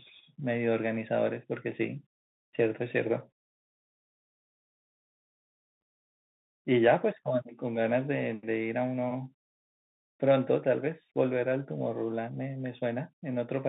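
From the start the speech sounds boxed-in and telephone-like, with a scratchy edge on s sounds, harsh distortion on loud bright passages and a fine granular hiss beneath everything. This is the Bluetooth CVSD headset codec. The audible band runs only from about 150 Hz to 3.7 kHz, and the coarse one-bit up-or-down coding, which fits CVSD's 64 kbps link, cannot track fast high-frequency movement. The damage is plainly audible.

At 5.81 s there is a brief hole of about 7.5 ms with an abrupt edge, and the speech returns momentarily quieter. This is unconcealed Bluetooth headset packet loss. What sounds like a single voice packet between headset and phone never arrived, and silence or an idle pattern filled the gap instead of anything that would smooth it over. The CVSD decoder then needed a moment to rebuild its step size, which causes the brief dip in level.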